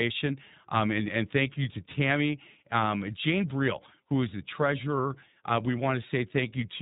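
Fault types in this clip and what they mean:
iLBC codec: present throughout, this narrowband VoIP codec codes the excitation of each 20 ms frame independently, without drawing on the frame before. Nothing above 3.8 kHz gets through, so the speech sounds thin and telephone-like. The coding damage is plainly audible as a rough, slightly synthetic grain on the speech, here at iLBC's 15.2 kbps mode.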